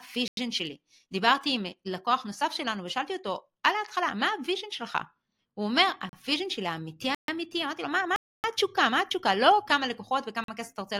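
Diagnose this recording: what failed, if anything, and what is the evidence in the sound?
Driver or buffer stage: blocks of digital silence at 0.28, 6.09, 7.15, 8.16 and 10.44 s, 38 to 280 ms long, cutting out and back with no fade as unfilled buffers output zeros.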